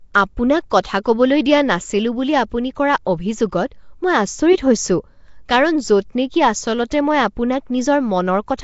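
Throughout, the speech has a rough, hissy halo and a smeared, underwater sound. Nothing reaches above 7.7 kHz. The likely cause is Nellymoser compression, which gives weak bands no bits and fills them with noise. The damage fits a rate near 32 kbps.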